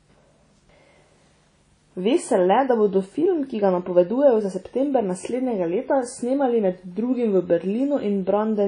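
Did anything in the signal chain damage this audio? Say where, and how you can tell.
Yes, at the codec stage, likely WMA compression at a low bitrate around 32 kbps. Throughout the speech nothing remains above 10.1 kHz, and long transform blocks spread quantisation noise over tens of milliseconds, so the sound rings and washes, with hiss breathing alongside it.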